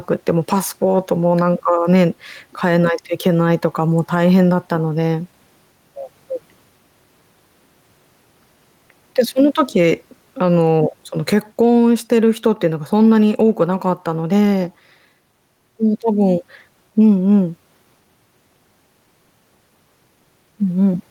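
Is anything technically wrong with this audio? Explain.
Yes. Gain pumping runs through the whole speech clip. The gain swings by roughly 5 dB, so loud and quiet passages sit unnaturally close in level and the delivery sounds squashed. The likely cause is input gain set far too high, with a fast limiter or compressor clamping down on every loud syllable. On a waveform the peaks look flattened and the gaps between phrases look raised, and a spectrogram shows the noise floor brightening in pauses and dimming under speech.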